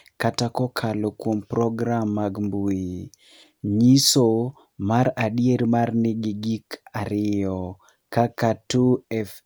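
A speech recording with no audible technical faults at any point.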